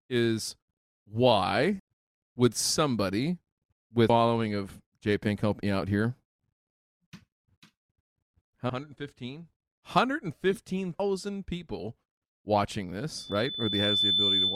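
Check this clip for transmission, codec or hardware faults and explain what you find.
Two faults are audible: repeated skips through the speech, and a feedback squeal at the end.

Audio missing between chunks: at 1.80, 4.10, 6.40, 8.70, 11.00 and 13.30 s the speech jumps abruptly, dropping roughly a fifth of a second each time, once just before "would somebody" and once right after "help me out here". The likely cause is a processor losing a slice at each boundary between chunks of about 2.5 s and joining the ends without any gap.

Loudspeaker feedback squeal: from 13.18 s to the end, a steady 3.5 kHz tone swells over roughly a second until it sits about 5 dB above the speech. A microphone is picking up its own loudspeaker, and at that frequency the loop gain exceeds one, so the tone keeps feeding itself.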